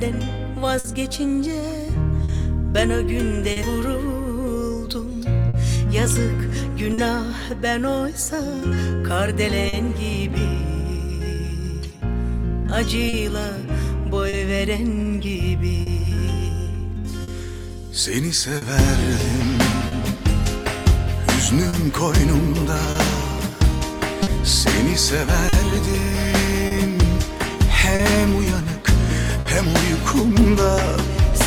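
Right from the start there's clock drift between sender and receiver: the sender's clock runs a few percent slow, so the receiver's buffer keeps draining and it has to keep patching to stay in step. That's behind most of what follows.

Between 0.79 and 3.58 s you get scattered short gaps, about three of them, none longer than roughly 50 ms. Each hole was filled by carrying the last bit of sound forward, so you hear small ticks or smears rather than dropouts.

From 4.35 s to 31.34 s the receiver makes repeated timing corrections, repeating short pieces so playback runs at about 99% speed and picks up around a fifth of a second overall. They're uneven and mostly show up as faint hiccups or a slightly wobbly tempo.

There are three short stalls from a late packet: 5.49 to 5.56 s (50 ms filled), 6.94 to 7.00 s and 9.69 to 9.75 s (40 ms each). Each time the buffer ran dry, and the last sound got held a touch too long with a slight buzzy dip before carrying on, nothing lost.

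More scattered short gaps come between 13.09 and 19.94 s and again from 21.69 to 29.47 s, about seven in each stretch, the longest near 50 ms. They sound the same as the early ones: brief ticks and smears.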